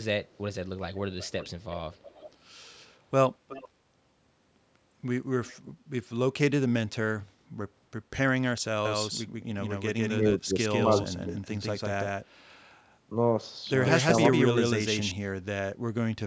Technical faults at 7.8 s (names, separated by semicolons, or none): none